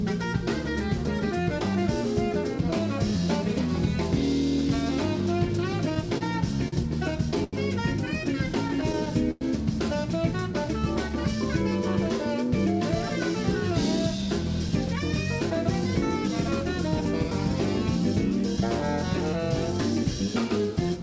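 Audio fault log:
5.95–7.55 s and 8.55–9.43 s: repeated stalls (stutter). Packets arrived late, and the jitter buffer kept running dry. The receiver stretched the last sound over 7 and then 6 short gaps, with the longest gaps about 88 ms and 100 ms. Nothing is lost, but the sound drags and stutters.
10.33–11.10 s: jitter buffer slow-down. The buffer was low, so the receiver repeated single pitch periods to build a reserve. That added 50 ms. The sound plays at 95% speed with unchanged pitch and drawn-out sounds.
13.35–17.31 s and 18.32–20.11 s: jitter buffer speed-up. The buffer held too much audio, so the receiver trimmed short pitch-period pieces, about 150 ms and then about 70 ms. The sound runs at 104% speed with the same pitch.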